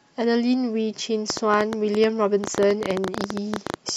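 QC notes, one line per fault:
1.30–3.96 s, train of clicks: from 1.30 s to the end of the clip, a burst of sharp, similar-shaped clicks arrives at an uneven pace averaging 11.6 per second, around thirty in all. They peak well above the speech level, so they tick and pop over both the speech and the pauses. Similar pulses repeating this quickly point to an external source, likely electrical interference from nearby equipment or a faulty connection or power supply.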